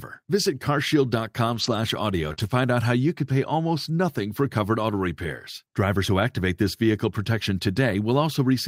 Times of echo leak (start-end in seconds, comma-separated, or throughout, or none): none